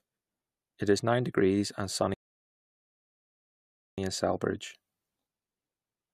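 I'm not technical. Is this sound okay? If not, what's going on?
No. There's a rebuffering stall: the player ran out of downloaded audio and had to wait for more. At 2.14 seconds the speech drops to silence, then picks up exactly where it stopped at 3.98 seconds. Nothing is missing, but about 1.8 seconds of dead air is added.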